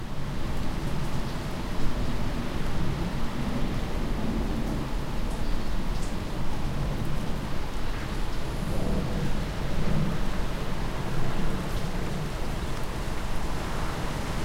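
Nothing stood out on listening to these sounds.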